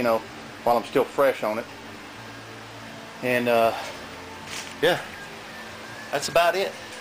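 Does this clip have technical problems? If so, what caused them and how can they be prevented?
No, there are no technical problems to report here.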